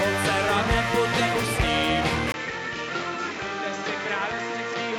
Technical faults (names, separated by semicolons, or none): input switched to a poorer device